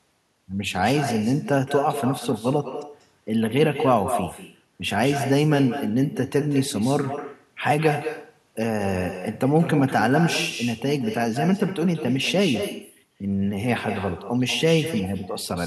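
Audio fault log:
throughout: echo with no canceller. Each stretch of speech returns roughly a fifth of a second later, about 10 dB quieter and thinner, because the far end's loudspeaker leaks into its microphone uncancelled. Waveforms show smaller delayed repeats; spectrograms show faint, offset ghost bands.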